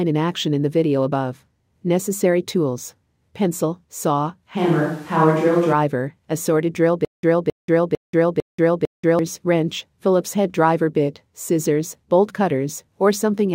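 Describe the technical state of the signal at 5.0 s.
At 5.0 s the speech sounds abruptly roomy, hollow and thin in the bass, with room noise rising to roughly 30 dB below it. From 4.59 to 5.71 s, after "tools pencil saw", a switch to a distant microphone likely replaced the close one.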